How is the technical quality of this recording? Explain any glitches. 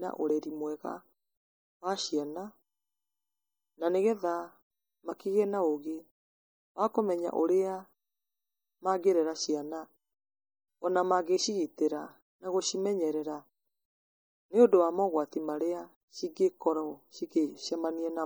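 Quality is compromised by plainly audible data-compression damage running the whole length of the speech. Throughout, weak spectral detail flickers between frames, giving a watery swirl and metallic chirps on s sounds. This is likely MP3 compression at a low bitrate, around 48 kbps. Unlike noise-reduction warble, it persists even though content reaches 21 kHz.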